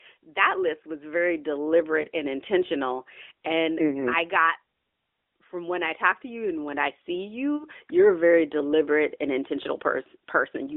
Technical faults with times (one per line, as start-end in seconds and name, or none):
2.02-2.06 lost AMR speech frames
4.00-4.08 lost AMR speech frames
7.56-7.67 lost AMR speech frames